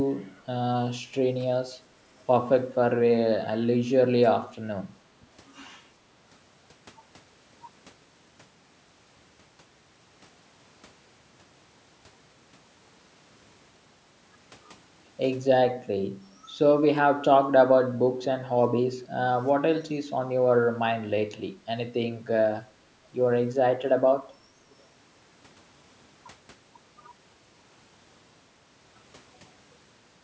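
Echo leak at 24.71 to 24.75 s in this speech recording: a brief, very faint copy of the talker returns 372 ms late, likely loudspeaker sound that the far end's echo canceller failed to remove.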